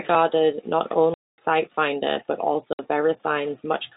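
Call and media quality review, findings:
Packet loss filled with silence, 1.14–1.38 s (240 ms) and 2.73–2.79 s (60 ms): jitter buffer inserting silence for missing packets; hard-edged gaps, lengths fit 30 ms packets. G.711 telephone band, nothing above 4 kHz.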